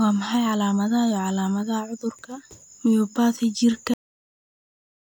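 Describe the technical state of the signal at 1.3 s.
At 1.3 s the signal is intact, with no dropout, distortion, glitch or other audible fault at that point.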